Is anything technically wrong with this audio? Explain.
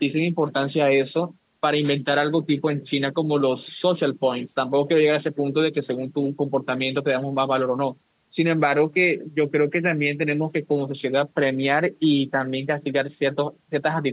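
No, nothing is technically wrong: the speech carries the ordinary narrowband sound of a phone-style call, with nothing above 4 kHz, which fits a G.711 A-law call path, and that top limit is simply how such a call is meant to sound.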